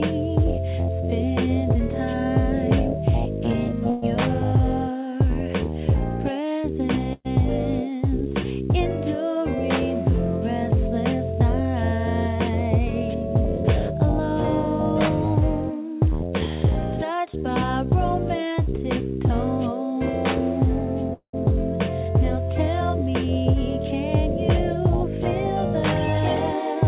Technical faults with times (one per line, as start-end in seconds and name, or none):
3.90-4.04 call audio freeze
7.13-7.27 call audio freeze
12.91-13.96 jitter buffer speed-up
16.27-17.45 jitter buffer speed-up
21.13-21.35 call audio freeze